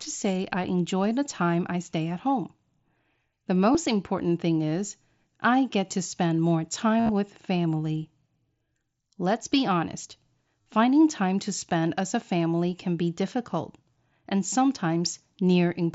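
A near-hidden blip at 3.73 s, just before "important thing is I"; a buzzy held tone with a slight warble from 6.99 to 7.09 s, between "get to spend more" and "with family", its longest stretch about 60 ms; and a shorter buzz from 10.62 to 10.66 s, between "be honest" and "time to spend as". These are concealed Bluetooth headset packet loss: lost headset packets were filled by repeating a matching stretch of recent waveform.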